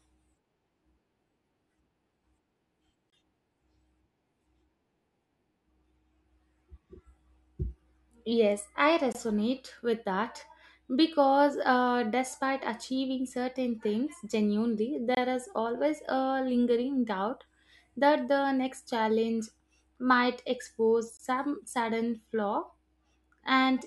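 At 3.10–3.12 s, 9.12–9.15 s, 15.15–15.17 s and 21.17–21.19 s the speech stops for about 23 ms each time. These are gaps between chunks: the audio arrives in 6-second pieces, and silence gets inserted at every join. Unlike a dropout, nothing is missing. The speech simply pauses and then resumes where it left off. The holes have hard edges and the exact same 6-second spacing, not random timing.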